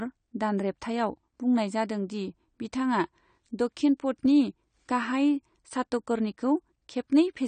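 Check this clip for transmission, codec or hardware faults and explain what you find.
One codec fault runs through the whole clip. AAC compression damage is plainly audible from start to finish: nothing is present above 9 kHz, so sibilants sound dull and smeared with a fizzy, warbling edge. This is likely a low-bitrate AAC-LC encode, consistent with about 32 kbps, where the encoder lowers its cut-off and starves upper bands of bits.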